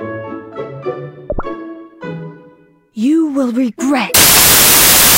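At 4.14 s the samples start getting built from the wrong bytes: the low bits land on top, so it bursts into loud, harsh broadband noise right to the end.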